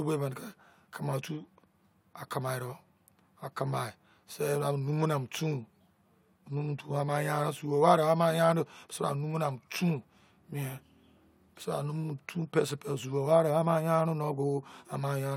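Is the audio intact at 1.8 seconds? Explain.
No. Clock slip clicks run from 0.11 s to 15.33 s, so 1.8 s falls inside them. A single sample is dropped or repeated about every 0.05 s, likely from two unsynchronised clocks drifting roughly 500 ppm apart, giving a soft, steady rattle through the speech.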